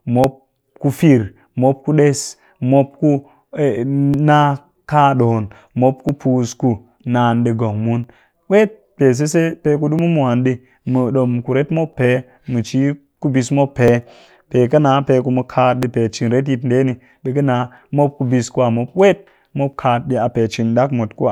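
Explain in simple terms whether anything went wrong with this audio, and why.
Something did go wrong. From about 0.24 s to 19.73 s there's a click roughly every 1.95 s, about ten in all, ticking along steadily under the speech. That regular rhythm is the tell for what's likely clock drift buffer slips. Two pieces of gear are running on slightly different clocks, off by something like 700 parts per million. The buffer between them slowly drifts until a chunk of several dozen samples gets dropped or repeated, and each of those jumps is a click.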